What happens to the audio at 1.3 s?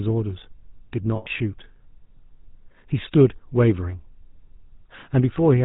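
Right around there, from 1.16 to 1.27 s, you hear lost GSM frames. The decoder keeps replaying the last good frame's settings, so for roughly 100 ms (about five 20 ms frames) the speech freezes into a rough, metallic ring.

Underneath that, and all through the speech, there's the GSM full-rate codec at 13 kbps. It models the vocal tract and drives it with a sparse pulse train, and it cuts everything above 4 kHz. The result is a plainly audible buzzy, gravelly, band-limited roughness.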